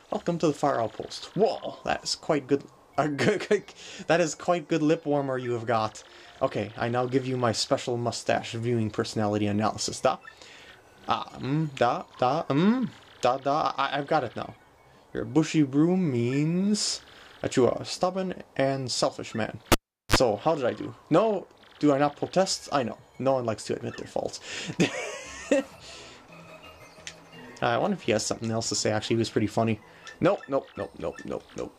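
At 19.72 s a cable is pulled and plugged in again: a pop, then about 390 ms of near silence, a 41 ms burst of 50 Hz mains buzz as only the tip makes contact, and a second pop at 20.16 s. That buzz sets it apart from a plain dropout.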